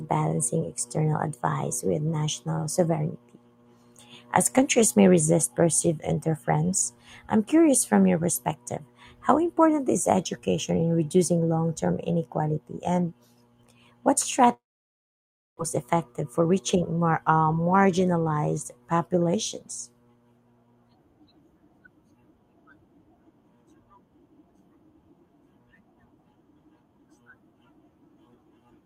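At 14.53 s the speech breaks off, and the gap lasts until 15.61 s. The last sound is stretched into a short buzzy tail that fades, leaving roughly 0.97 s of near-silence. About 1 s of speech never returns. This is a long network dropout, likely caused by packets failing to arrive. The receiver concealed the loss briefly, then gave up. Playback resumes later in the stream, shifted by a few tens of milliseconds.

From 16.24 s to 16.83 s the speech runs at about 107% of normal speed without any change in pitch, so it sounds hurried. This is a jitter buffer speed-up. Audio piled up in the buffer beyond its target, and the receiver drained the excess by cutting many short pitch-period-length pieces in succession. Around 50 ms is removed in total, bringing the delay back toward its target.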